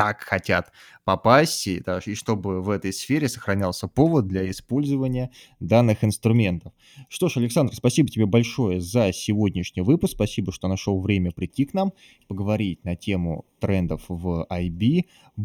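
Speech that turns hollow and phasey from 4.71 s to the end: channel delay (comb filtering), one channel lagging roughly a third of a millisecond, carving evenly spaced notches from about 1.5 kHz.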